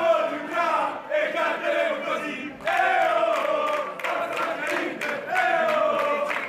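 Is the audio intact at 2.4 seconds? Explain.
Yes, the audio is intact at 2.4 seconds, with no dropout, click, distortion or other fault audible at that point.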